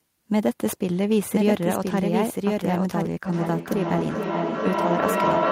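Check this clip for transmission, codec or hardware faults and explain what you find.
Two faults are present in the speech.

From the start of the clip to 3.06 s, already under way when the audio begins, there is a doubled audio track: a second full-band copy of the speech runs roughly one second behind the original and about 5 dB quieter. The copy has no decay or added room colour, and it stops abruptly at 3.06 s. The likely cause is the signal being captured twice, once through a slower path, or an edit that left two misaligned copies in the mix.

From 3.25 s to the end at 5.51 s, there is feedback echo between two devices. Each phrase returns at intervals of about 0.4 s, growing thinner and more ringing with each pass. The loop is loud enough that the repeats build up rather than fade, peaking at about 1 dB above the speech. This occurs when two devices in one room are on the same call: one plays back what the other's microphone sent, and that microphone picks it up again. 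Each device's echo canceller removes only its own playback, so the loop is never broken.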